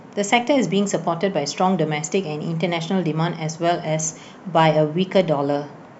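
Nothing in the speech stood out as a fault on listening.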